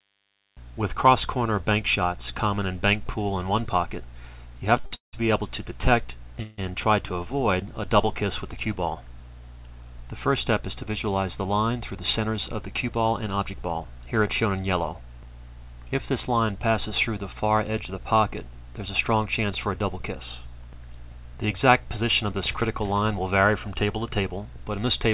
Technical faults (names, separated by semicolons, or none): short stall from a late packet; call audio freeze; jitter buffer speed-up; bit error spike